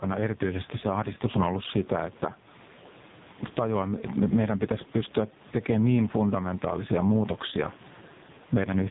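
From start to end, the level moves against the talker by about 10 dB. Loud and soft parts sit close together. Gain pumping from a fast limiter on an overdriven input is the likely cause.

The AMR narrowband mobile codec is also present for the full length. Nothing passes above 3.8 kHz, so the speech is thin and muffled. The damage is heavy. The speech sounds buzzy and synthetic, and the room noise swirls into a warble, which fits a very low bitrate near 5 kbps.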